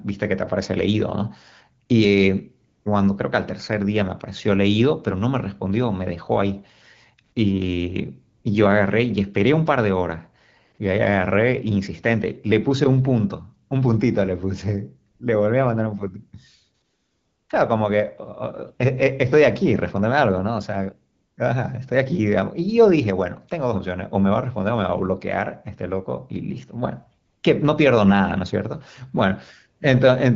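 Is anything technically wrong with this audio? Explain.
Yes. The speech pauses carry AMR comfort noise. It appears at 1.85, 2.67, 8.37, 15.11, 16.85, 21.13 and 27.25 seconds, lasting from 40 ms up to 640 ms, the longest at 16.85 s. In each gap the phone judged the talker silent and stopped sending speech frames. The receiver then filled the gap with synthetic noise built from a rough level and spectrum. The real background drops out. A smooth, even hiss switches in and out in its place. The speech itself carries only light AMR wideband coding texture, which fits a 12.65 kbit/s HD Voice link.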